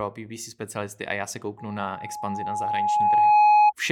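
From 1.58 s to 3.73 s a steady tone near 839 Hz swells over about two seconds to sit well above the speech, maybe 15 dB louder. This is loudspeaker feedback squeal: the microphone hears its own loudspeaker, and at that frequency the loop keeps amplifying itself.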